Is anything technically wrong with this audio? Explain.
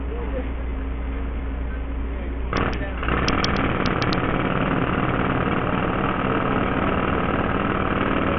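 Yes. Throughout, the treble is missing above 6 kHz, with gritty noise and aliasing, likely from heavily compressed Bluetooth SBC coding. A starved bit pool, pointing to a very low bitrate, leaves upper sub-bands empty and the rest coarsely quantised.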